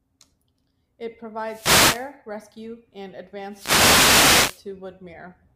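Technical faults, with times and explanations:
1.43–2.13 s and 3.49–4.66 s, wireless microphone noise hit: two bursts of static swish over the voice, the first about 0.7 s long and the second nearer 1.2 s. What's happening is the FM radio link from the mic dipping as reflected copies of the signal partly cancel at the receiver. With less carrier getting through, the receiver's own hiss rises and sits on top of the speech until the signal recovers.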